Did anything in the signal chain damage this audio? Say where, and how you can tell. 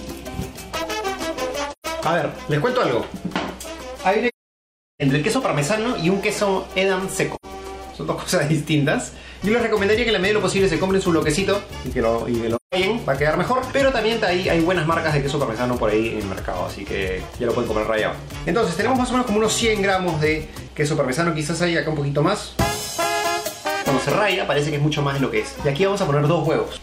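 Yes: at the codec stage, AAC frame loss with muting. Frames went missing and the decoder zeroed them, so the sound fades out and back in over soft-edged holes at 1.72 s (0.13 s), 4.28 s (0.73 s), 7.35 s (0.09 s) and 12.55 s (0.17 s).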